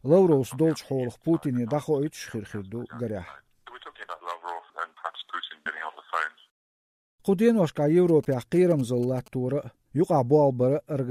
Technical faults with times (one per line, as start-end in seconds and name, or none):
8.09-9.28 GSM signalling bursts